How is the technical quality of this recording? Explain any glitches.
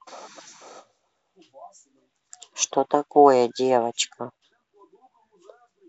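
Nothing here sounds like a glitch, so there's really nothing technical to flag in this speech recording.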